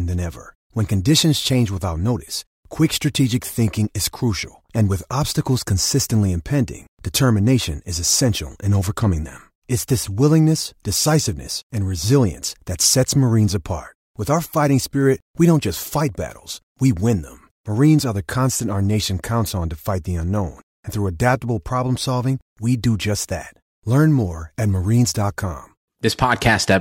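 Near the very end, from 26.07 to 26.77 s, the speech picks up a crackly roughness on its loudest moments. This is hard clipping: the level runs about 3 dB past what a stage can pass, so peaks are sliced flat, adding high harmonics.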